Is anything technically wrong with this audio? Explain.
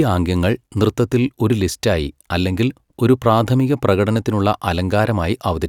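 No, nothing technically wrong can be heard here.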